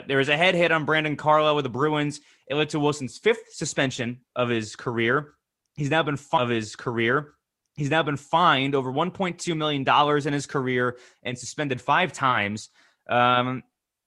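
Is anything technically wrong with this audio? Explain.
Yes. There is a stream segment repeated in this speech clip. At 6.37 s, just after "now been", the audio jumps back and replays. The repeat runs to 8.37 s and adds 2 s to the programme. The player fetched or queued the same chunk of the stream twice and played both copies in sequence. You hear a small blip at the jump point. Then the preceding stretch of speech plays a second time.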